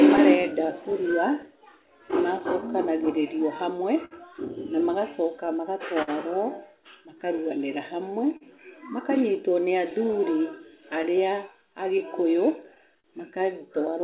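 Clock drift between sender and receiver runs through the whole recording. The sender's clock is slow by a few percent, so the jitter buffer keeps draining and the receiver must stretch the audio to keep playing. This produces a faint, recurring unevenness in timing across the speech rather than any single obvious event. The band stops at 4 kHz, consistent with a G.711 A-law call path.

From 0.17 to 4.14 s there are scattered short gaps. Around fifteen small holes appear where packets arrived late or not at all, and each was patched by extending the preceding sound. Together they cover roughly 150 ms, and none lasts much beyond 50 ms. They come through as brief ticks or slight smears, while the speech stays intelligible.

Repeated timing corrections begin at 0.91 s and continue to the end. Because the sender is slow, the receiver repeatedly inserts short pieces, all in the same direction and at irregular spacing. 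This slows playback to about 99% speed and adds roughly 200 ms in total. Each edit is small.

From 5.46 to 13.07 s, scattered short gaps return with the same mechanism. Around fifteen concealed losses total roughly 200 ms, each no longer than about 50 ms, and they are heard as isolated ticks and brief smears.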